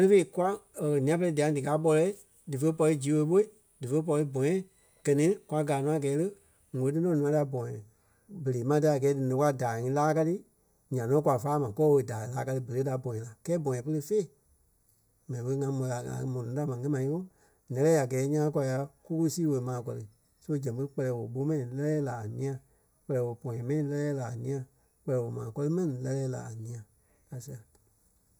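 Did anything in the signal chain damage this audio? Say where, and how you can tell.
Yes. From 6.91 s to the end, the speech turns hollow and phasey, a channel delay (comb filtering) fault at the stage where two channels are summed to mono. One channel arrives a fraction of a millisecond late, which fits an offset of a few samples, so common content cancels at evenly spaced frequencies, starting near 3 kHz. Unlike a codec low-pass, the top end isn't removed. Energy returns between fixed notches that don't move with the speech.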